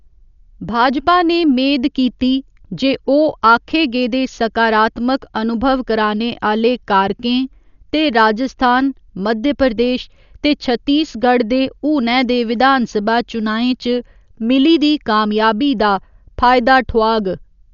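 Throughout the speech, the sound is dull and rough, with a fluttering noise clinging to the voiced tones. This is likely Dolby Digital compression at a starved rate, around 48 kbps. A spectrogram shows nothing above 6.9 kHz, with speckled, noisy fill replacing fine harmonic detail.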